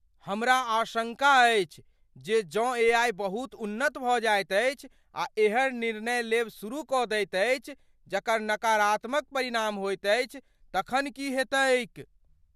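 At 2.89 s, just before "बहुत उन्नत", the speech is hit by a DC step: the waveform's zero line suddenly jumps to a new offset, as if a converter recalibrated or an offset input was switched in. The shift then bleeds away as it would through a 2 Hz high-pass, so it is heard as a single low thump under the speech. On the waveform the whole trace lurches off centre and drifts back, while the spectrogram shows a brief broadband smear concentrated at the very bottom.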